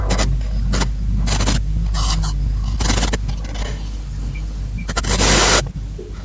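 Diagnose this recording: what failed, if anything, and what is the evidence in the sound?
Echo leak, at the call-processing stage. A faint delayed copy of the speech returns at 0.31, 0.86, 1.84, 2.62, 3.18 (lasting to 4.87), 5.64 and 5.97 s, trailing by about 0.49 s and later 0.43 s. The likely cause is an echo canceller letting loudspeaker pickup through.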